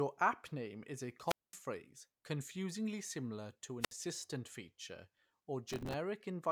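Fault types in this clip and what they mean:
wireless microphone squelch dropout: fading radio signal trips the receiver's squelch, giving hiss then mutes of 0.22 s after "app name is a" and 0.06 s after "confusingly similar to".
processor overload crackle: from 5.68 to 5.94 s, dozens of missed deadlines on what sound like roughly 3 ms buffers replay old audio, producing gritty, hard-edged crackle.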